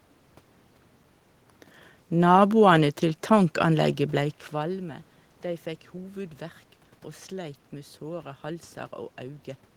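Nothing technical goes wrong in this speech recording; the background noise of the room belongs to the space itself, and the level shift around 4 seconds is just the talker moving relative to the microphone.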